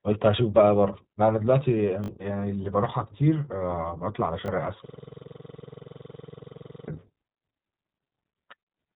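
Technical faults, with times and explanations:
Throughout, iLBC codec: the speech was squeezed into a narrowband VoIP codec, which fits about 15 kbps in 20 ms frames, cutting everything above 3.8 kHz and leaving it plainly rough and synthetic.
2.04 to 2.08 s, repeated buffer: fresh audio arrived late, so a 20 ms buffer was replayed twice more, producing a quick stutter with hard joins and about 40 ms lost.
4.46 s, repeated buffer: the same late arrival made one 20 ms buffer play again, heard as a brief stutter where roughly 20 ms of audio went missing.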